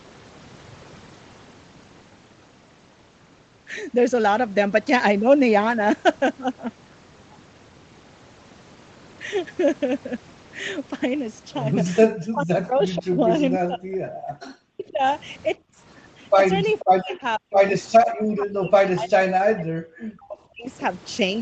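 From 12.1 to 13.98 s, and again 14.29 to 15.03 s, the speech dips deep, around 40 dB at worst. That's speech suppressed in double talk, likely the echo canceller ducking everything while the far end talked over it.

Right after, at 15.57 to 15.79 s, the room tone drops out by about 30 dB for a fifth of a second. That's background gated by the echo canceller, which clamped the mic while the loudspeaker played and then released it.

At 16.8 s there's a quick echo leak: a faint copy of the voice arriving 490 ms late, roughly 20 dB under the speech, likely loudspeaker pickup that the canceller didn't fully remove.

The double-talk suppression then returns from 16.83 to 17.66 s and from 18.36 to 20.67 s, with the same sunken speech dropping about 40 dB at the deepest points.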